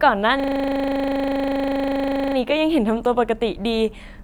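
Speech, with a system hang loop from 0.4 to 2.36 s. One 40 ms slice repeats nearly fifty times, making a steady 25 Hz buzzing stutter. The driver stalled while the hardware kept replaying its ring buffer. Little audio seems lost.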